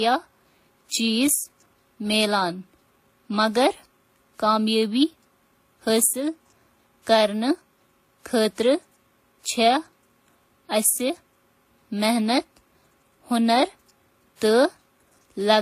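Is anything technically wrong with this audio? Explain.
Yes. Throughout the speech there are signs of transcoding between lossy codecs, likely a low-rate HE-AAC encode, consistent with around 20 kbit/s, later re-encoded to WMA at a rate near 64 kbit/s. The second encoder spends its bits reproducing the first one's damage rather than the original signal, then adds its own errors. Nothing is present above 14.9 kHz. The smeared, swirly high-band texture of the first codec sits alongside the quantisation noise of the second.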